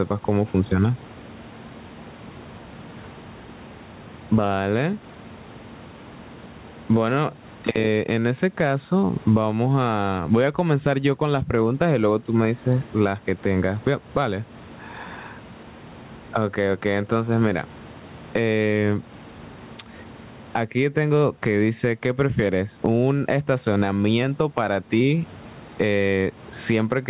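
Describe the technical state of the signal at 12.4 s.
At 12.4 s, as throughout, gain pumping: the gain swings roughly 20 dB, squashing loud and soft parts closer in level, likely a fast limiter on excessive gain. Unlike gating, background never cuts out.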